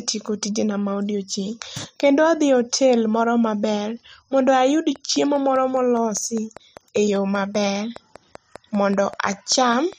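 A speech recording that develops a train of clicks from 4.96 s, just after "moro maber mondo ayud", to 9.94 s: around thirty near-identical ticks at a steady 5 per second, roughly as loud as the voice and present in the pauses too. That even repetition of one pulse shape sets it apart from random crackle or a single stray click, and points to periodic electrical interference or a likely faulty connection or power supply.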